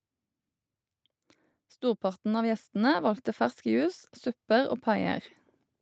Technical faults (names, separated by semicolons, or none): automatic gain rising